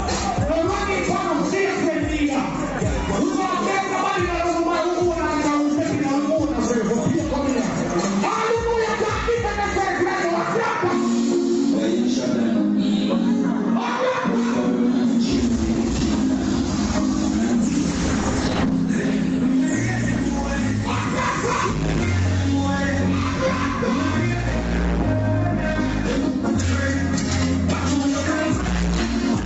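Gain pumping runs through the whole clip, likely from input gain set far too high with a fast limiter clawing it back. The level swings by about 5 dB, leaving the sound squashed.

From 17.63 s to 22.23 s there is a call bitrate drop. The Opus encoder, whose audio already stops at 8 kHz, is forced from 32 kbps down to 9 kbps, bottoming out for about 1 s. The sound turns rough and watery, then clears as the rate recovers.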